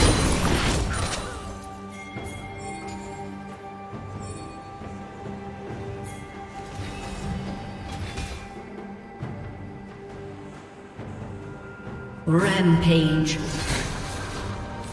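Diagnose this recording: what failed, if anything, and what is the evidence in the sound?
No fault detected anywhere.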